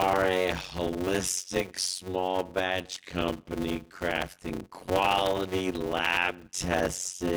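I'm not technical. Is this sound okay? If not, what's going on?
No. Throughout the clip the speech has a steady buzz at about 92 Hz and plays at roughly half speed. This is a block size mismatch (padded): each short chunk of audio, likely 256 samples, is topped up with silence.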